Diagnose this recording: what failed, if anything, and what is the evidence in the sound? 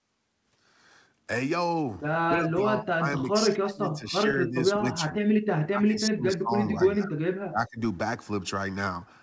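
Call processing: speech ducks at 2.28–2.65, 2.82–4.07, 4.27–4.56, 4.75–5.2, 5.7–7.24 and 7.43–7.8 s, by up to about 35 dB. That's likely speech suppressed in double talk, with the echo canceller clamping both sides down during overlap.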